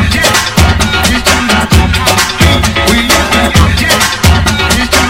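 A harsh, gritty fuzz rides on every loud moment from start to finish, the mark of hard clipping. The signal is driven about 10 dB beyond what a stage can pass, so its peaks are sheared flat, roughly 7 percent of samples, spraying high harmonics.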